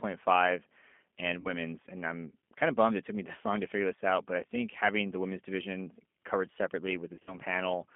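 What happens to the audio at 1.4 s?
At 1.40 s a run of VoIP packets fails to arrive, roughly 50 ms of audio, which fits about five 10 ms codec frames, and the receiving speech decoder covers the gap with packet loss concealment. It keeps regenerating sound from the last pitch period and vocal tract filter it received, lowering the gain each frame. The speech smears into a short, fading buzzy tone or coloured noise. Because each G.729 frame depends on the state left by the one before, the decoder needs time to resynchronise, so the damage lasts until about 1.51 s and the voice is still weak or distorted as it returns on "and I'm kind of".

This happens on top of the G.729 codec that runs through the whole clip. The roughness points to an 8 kbit/s coding rate. G.729 rebuilds each frame from a filter model, a pitch predictor and a few excitation pulses rather than the actual waveform. The result here is plainly audible: a rough, slightly synthetic voice confined to a band of about 200 Hz to 3.5 kHz, with nothing heard above that range.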